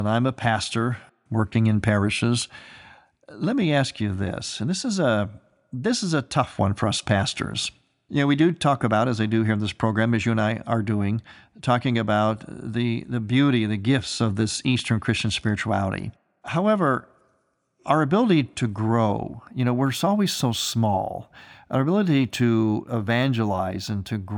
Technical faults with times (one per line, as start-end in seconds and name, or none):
19.50-24.37 imaging from linear upsampling